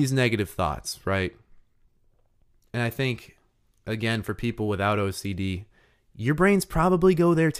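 No technical faults can be heard anywhere in the recording.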